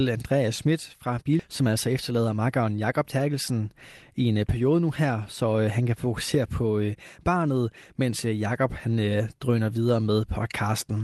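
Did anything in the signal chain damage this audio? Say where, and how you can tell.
Yes. At 1.39 s there is a skip ahead at the network and jitter-buffer stage: about a second of speech is gone, and the two sides are butted together with no fill and no pause. It sounds like an abrupt jump in the middle of the speech. A waveform shows a hard seam where the envelope changes shape instantly with no silence. A spectrogram shows harmonics and formants breaking off and restarting discontinuously in a single column.

From 1.61 to 2.67 s a jitter buffer speed-up follows. After the jump, the receiver's buffer still held more audio than its target, so it trimmed short pitch-period-sized pieces again and again, removing roughly a tenth of a second. The speech runs at 108% speed with unchanged pitch and sounds slightly hurried. On a spectrogram, harmonic spacing stays constant while syllables and formant transitions are compressed in time. 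The Opus call path at 24 kbps sets the 12 kHz upper band limit visible throughout.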